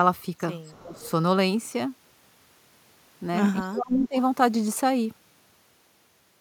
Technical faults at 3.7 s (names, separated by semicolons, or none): speech suppressed in double talk